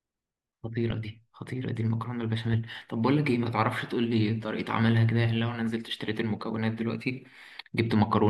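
No technical faults can be heard anywhere in the recording.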